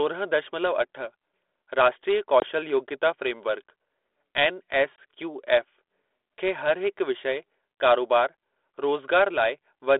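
At 2.4 s the speech drops into a hard-edged hole of about 20 ms. This is packet loss on an ADPCM call, roughly one packet's worth filled with silence. The decoder's predictor and step size then disagree with the sender's. So the sound comes back slightly distorted, and it settles by 2.46 s. The same thing happens again at 4.96 s, a 20 ms gap settling by 4.98 s, over the light 32 kbit/s G.726 band-limited coding.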